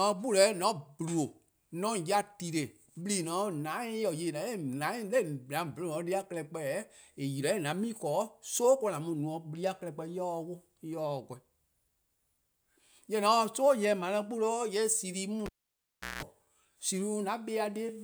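Speech with a cable pulled and plugged in, 15.46–16.23 s: pop, 0.72 s near silence, 180 ms of 60 Hz buzz, second pop. The buzz distinguishes it from a dropout.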